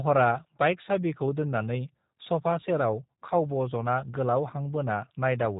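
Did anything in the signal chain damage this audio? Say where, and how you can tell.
Yes, at the codec stage, throughout. This is G.729 damage: nothing above 3.8 kHz, and the speech sounds plainly rough and synthetic, consistent with 8 kbit/s pulse-based frame rebuilding.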